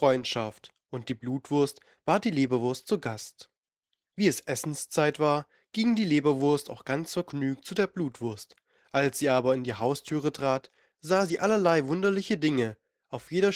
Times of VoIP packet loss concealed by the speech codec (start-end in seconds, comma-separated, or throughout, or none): none